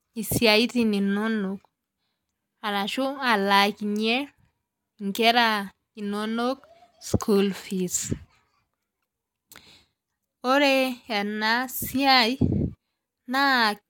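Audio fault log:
No audible faults are present in this speech recording.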